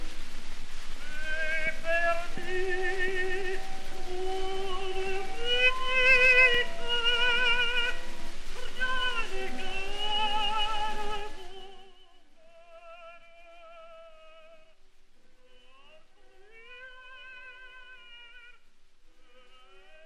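At 6.54 s there is a block of digital silence about 2.7 ms long, consistent with one 128-sample output buffer going unfilled. The audio drops out and returns with no fade, and since the gap is so short it is heard as a single tick rather than a hole.

From 11.1 s to 12.04 s, zipper noise rides on the sound as the level falls by roughly 25 dB. The gain moves in unsmoothed 1 dB steps at about 30 per second, and each step adds a small click, giving a rapid ticking texture throughout the fade.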